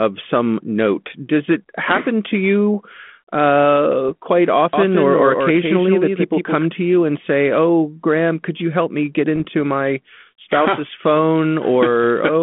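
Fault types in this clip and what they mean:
Bit errors on an ADPCM link: at 4.08–4.11 s and 9.36–9.48 s, flipped bits derail the decoder's step size and predictor, causing rough pops and brief level jumps.
Doubled audio track: from 4.73 to 6.65 s, a full-band copy about 5 dB quieter trails roughly 150 ms behind, likely from a second, slower capture path, starting and stopping abruptly.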